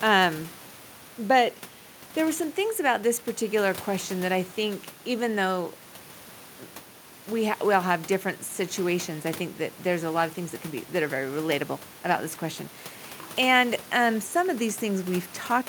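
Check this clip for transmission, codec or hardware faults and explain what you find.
No transmission, codec or hardware faults.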